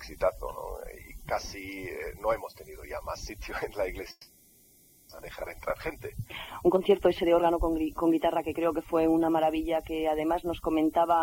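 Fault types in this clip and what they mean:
long network dropout: From 4.11 to 5.13 s the last sound is stretched into a fading buzz, then a brief near-silence, and the audio resumes with about 600 ms gone. The likely cause is a long gap in packet arrival that the receiver covered by concealment.
jitter buffer speed-up: From 5.21 to 9.08 s the audio plays about 10% fast at unchanged pitch and sounds hurried. Short pitch-period slices are being cut repeatedly, removing roughly 400 ms, so the receiver can drain the backlog built up after the dropout.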